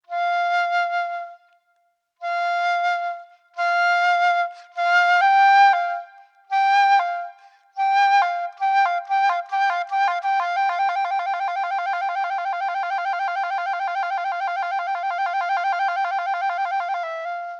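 No technical faults can be heard anywhere in this audio.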